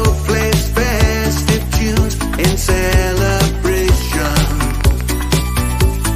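From 4.12 to 5.12 s there's a train of clicks: about ten sharp, matching pops at a steady 10.2 per second, a little louder than the sound itself. That regular ticking points to likely interference from nearby equipment or a faulty connection or power supply injecting pulses.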